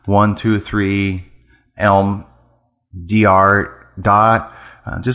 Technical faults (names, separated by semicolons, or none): none